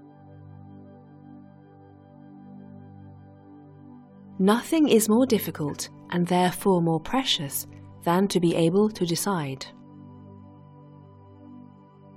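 No technical faults are audible anywhere in this audio.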